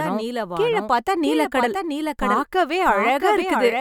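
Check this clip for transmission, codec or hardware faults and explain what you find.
The clip has one fault throughout: a doubled audio track. A second capture path or misaligned edit likely mixed in a copy, leaving a dry, full-band repeat about 0.7 s behind and roughly 5 dB quieter.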